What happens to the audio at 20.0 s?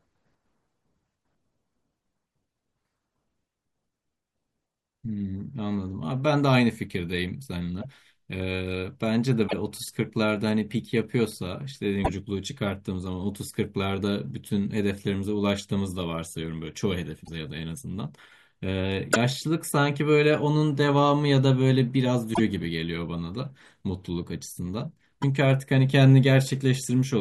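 Nothing goes wrong at 20.0 s; the speech runs on intact through that moment, with no dropout, click or distortion to be heard.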